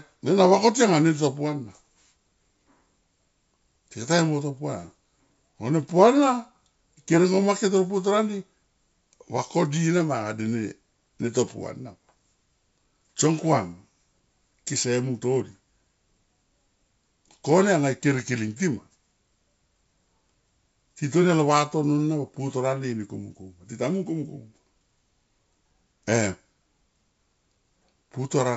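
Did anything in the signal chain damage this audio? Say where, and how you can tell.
Yes. At the codec/transmission stage, bit errors on an ADPCM link cause a rough pop from 18.16 to 18.20 s, with a brief level jump. Unlike a dropout or clip, the damage rings on after the click because corrupted bits upset the decoder's adaptive step size and predictor. The pattern fits a low error rate hitting a few frames of the G.722 stream.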